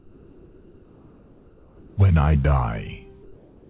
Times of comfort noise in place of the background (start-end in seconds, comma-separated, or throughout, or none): 0.00-1.97, 3.23-3.69